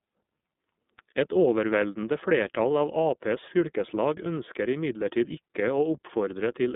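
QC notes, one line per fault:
Throughout: iLBC codec. The speech sounds boxed-in and thin, with nothing above about 3.8 kHz and the usable band running roughly 200 Hz to 3.6 kHz, plus a plainly audible rough, synthetic edge. The narrowband coder models each 30 ms frame's excitation on its own, without leaning on the previous frame, so fine detail is lost, which fits iLBC's 13.33 kbps mode.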